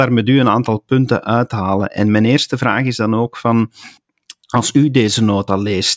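No technical faults can be heard anywhere in this speech recording.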